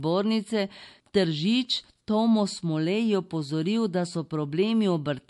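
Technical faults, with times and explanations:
Throughout, MP3 compression: the speech has nothing above 11.3 kHz and plainly audible codec damage, with a watery, swirling texture and metallic chirps on s sounds. This is likely a low-bitrate MP3 encode, about 52 kbps by the sound of it. The encoder ran short of bits, cut the treble at a fixed point and let weak frequency lines switch on and off between frames. A simple low-pass filter would dull the sound the same way but leave no swirl or chirps.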